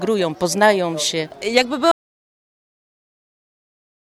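An audio dropout to silence begins at 1.91 s and lasts to the end of the clip. The sound cuts off mid-flow into silence with no room tone, most likely because the input was lost while the recorder kept writing silence, so nothing after that point survives.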